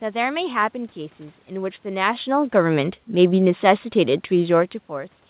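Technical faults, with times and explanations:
1.9 to 4.8 s, automatic gain falling: the level slides down by about 4 dB across these three seconds, with the room noise sinking along with it, because the automatic gain control judged the input too loud or its background noise too strong and gradually lowered its gain.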